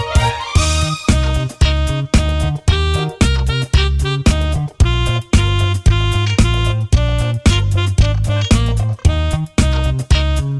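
No technical faults can be heard anywhere in the clip. There is nothing to mark at any point in the recording.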